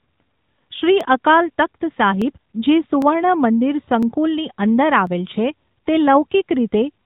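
AMR narrowband mobile codec damage runs throughout the speech: nothing above 4 kHz survives, and the pulse-driven vocal-tract model leaves a plainly buzzy, synthetic edge consistent with a rate around 10 kbps. Sharp single clicks at 1.01, 2.22, 3.02, 4.03 and 5.07 s are likely dropped samples: well under a millisecond vanishes, so the waveform jumps abruptly.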